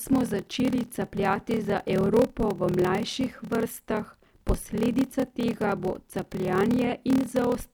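Block size mismatch (padded) runs throughout the speech: each block, which fits 1024 written samples, is read into a longer frame and topped up with silence. The repeated gaps give a 38.3 Hz buzz and slow delivery to 0.889 speed while timbre stays normal.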